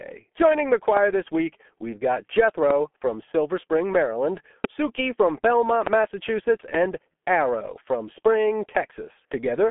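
Speech, carried through a G.723.1 codec at about 6.3 kbit/s with heavy codec damage: the voice is muffled and hoarse, consonants blur, and a spectrogram shows nothing above 3.6 kHz, with energy confined to the telephone band of 200 Hz to 3.4 kHz. Three loud pops, each about 22 ms long, land at 2.70 s (just after "this week we've got"), 4.64 s and 5.87 s. They stand roughly 15, 20 and 20 dB above the speech and appear as sharp waveform spikes and full-height vertical lines on a spectrogram. They are likely sudden voltage pulses from a plug, switch, static or driver glitch, with the speech continuing underneath.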